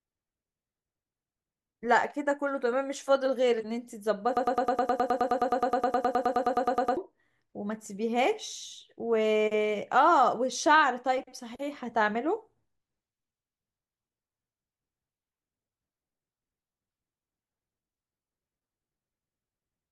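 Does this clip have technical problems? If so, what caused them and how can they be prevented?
Yes. From 4.37 s to 6.97 s the speech locks into a broken-record loop. A 105 ms fragment plays 25 times back to back as a rapid stutter, and the speech that belonged in those 2.6 s is lost. On a waveform, one short shape repeats identically. A spectrogram shows the same pattern tiled at even 105 ms spacing. The likely cause is a stalled player or stream that kept resending its last held fragment. Stall detection that outputs silence instead of repeating stale data would prevent it.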